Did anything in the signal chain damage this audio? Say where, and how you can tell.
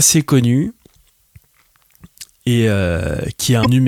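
Yes. There is damaged data in the compressed stream from 3.61 to 3.67 s, a break of about 50 ms near the end of this speech clip. The fault sits at the codec stage, in the stored or transmitted bitstream. Corrupted bytes there made the decoder misread or reject the affected frames and lose sync while it hunted for the next valid frame header. The result is a short, unnatural chirp, squawk, click or hole that is not part of the speech.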